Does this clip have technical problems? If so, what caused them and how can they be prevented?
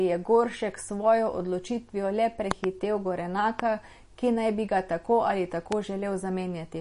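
Yes. Throughout the speech, the sound is watery and swirly, with chirpy, metallic sibilants and smeared consonant onsets, and nothing is left above 10.6 kHz. This is likely MP3 compression, and the amount of damage points to a bitrate of around 40 kbps. When bits run short, the encoder cuts the treble and lets weak frequency lines flicker on and off between frames. A plain low-pass filter would dull the sound without that swirl. Encoding at 128 kbps or more, or using a lossless format, would prevent it.

There is a loud pop, a pair of sharp clicks between 2.51 s and 2.66 s, then single pops from 3.60 s to 3.62 s and from 5.72 s to 5.74 s. They peak well above the speech, roughly 15 to 20 dB louder, while the speech carries on underneath. The likely cause is a voltage step or spike from a plug, switch, static discharge or driver glitch. A dropout would instead leave a gap in the sound. Secure connectors, grounded equipment and stable drivers would prevent these pops.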